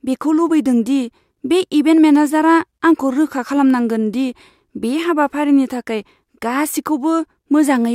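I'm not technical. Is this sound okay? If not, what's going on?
Yes, nothing in this recording points to a technical problem with how the signal was captured or passed along.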